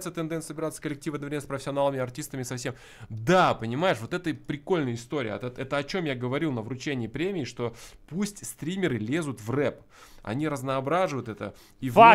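Listening closely turned up nothing that stood out as a technical fault anywhere in the audio.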